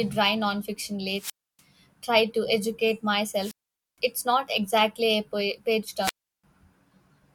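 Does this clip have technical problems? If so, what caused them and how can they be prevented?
Yes. The speech has three wireless microphone squelch dropouts: at 1.14 to 1.62 s, between "dry nonfiction" and "tried to educate", muting for 292 ms; at 3.38 to 3.99 s, between "tried to educate" and "it's not exactly a", muting for 466 ms; and at 6.01 to 6.44 s, muting for 344 ms. Each time the radio link weakened, hiss rose, and the receiver's squelch gate shut the output until the signal recovered. That rising static before the silence distinguishes it from a digital wireless dropout or a cable fault, which cut out abruptly or with a click. Prevention: keep clear line of sight, use diversity receivers with well-placed antennas, and choose an interference-free frequency.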